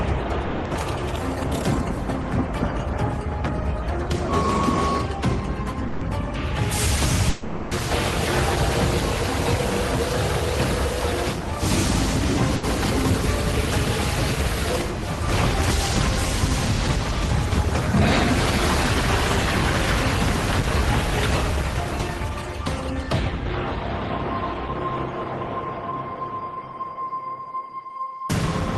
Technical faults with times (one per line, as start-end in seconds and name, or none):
0.45-0.67 long network dropout
2.21-2.25 short concealed packet loss
5.87-6.03 burst of packet loss
7.29-7.73 long network dropout
12.55-12.65 burst of packet loss
20.61-20.65 short concealed packet loss